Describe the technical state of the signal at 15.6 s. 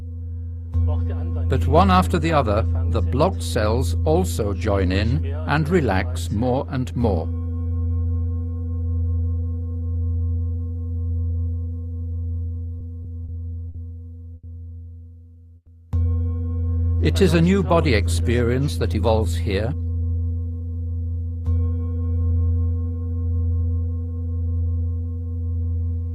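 At 15.6 s there is a call audio freeze, running from 15.56 to 15.69 s. The audio stalls and the last sound is stretched into a fading buzz or hiss for about 110 ms. It decays into roughly 40 ms of silence. Then the audio picks up exactly where it stopped, so nothing is lost. Everything after now sits about 110 ms later. The likely cause is delayed packets draining the jitter buffer until they arrived.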